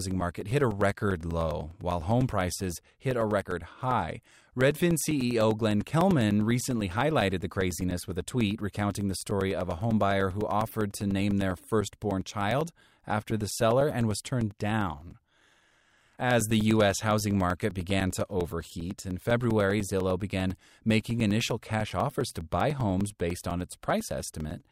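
From 0.11 s to 24.61 s the speech carries periodic USB or driver dropouts: every 0.1 s the audio path stalls and a few milliseconds of signal are replaced by silence. The result is a steady 10 Hz train of ticks, audible wherever speech is present.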